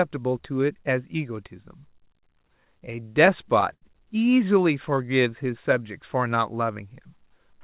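From 2.14 to 3.84 s the speech breaks into repeated stalls, a stutter. Packets arrived late or too slowly, so the jitter buffer kept running dry. Each time, the receiver stretched the last sound to fill the wait, fading it over the longer gaps. There are eleven such gaps. Together they fill about 171 ms, roughly a tenth of that stretch. The longest lasts 80 ms. Nothing is lost. The speech just catches and drags.

From 4.90 to 5.84 s there is a jitter buffer slow-down. The buffer was low or had just raised its target delay, so the receiver built a reserve by repeating single pitch periods and bits of pause. This adds 80 ms. The speech plays at about 92% of its speed with no change in pitch. Sounds are drawn out. Throughout the clip, the narrow call-path band, with nothing above 4 kHz, points to a G.711 A-law codec.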